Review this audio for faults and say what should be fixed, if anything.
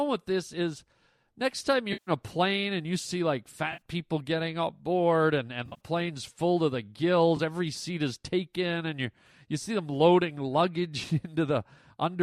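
AAC frame loss with concealment: lost frames made the decoder rebuild sound from the last good spectrum, leaving smeared, noisy patches at 1.93–2.11 s, 3.72–3.81 s, 5.66–5.80 s and 7.37–7.40 s. The middle two are scattered runs of around 40 ms, and light graininess likely comes from the low-delay AAC encoding.

Adding forward error correction or a larger jitter buffer on the transport would prevent these gaps.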